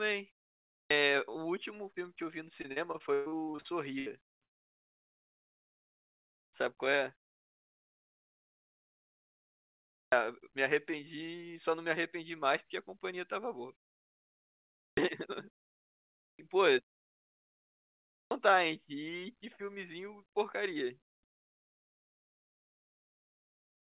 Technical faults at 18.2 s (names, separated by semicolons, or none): clipped start after a pause